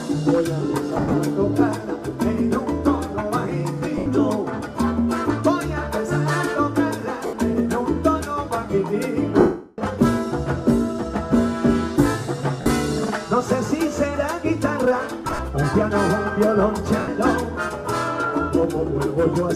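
Lost LE Audio frames break the sound seven times: at 0.98 s (130 ms scattered over 160 ms, longest run about 70 ms), 3.98 s (80 ms), 7.26 s (70 ms), 9.39 s (390 ms), 12.61 s (50 ms), 15.25 s (80 ms spread over 140 ms), and 16.99 s (90 ms). The LC3 decoder fills each gap by repeating the last spectrum with random signs, so tones turn into a noisy smear. The 9.39 s gap fades toward silence. On a spectrogram, harmonics blur into flat noisy blocks, and the waveform's envelope sags through the long gap.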